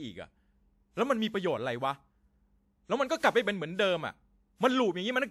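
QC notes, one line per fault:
throughout, generation loss: the speech sounds swirly, hollow and smeared, with softened consonant attacks, likely from about three passes through a lossy WMA-type codec near 96 kbit/s. Transients look blurred in the waveform.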